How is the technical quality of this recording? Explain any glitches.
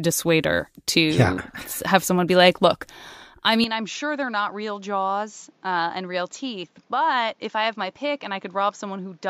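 The recording degrades partway through. At 3.64 s, just after "be like look I", the input was likely switched to a poorer device. The new path passes nothing above 7.6 kHz, so the speech turns duller and slightly quieter to the end, over a faint new background noise.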